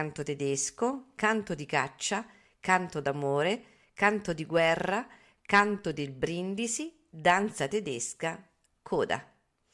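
No technical faults can be heard anywhere in this speech recording.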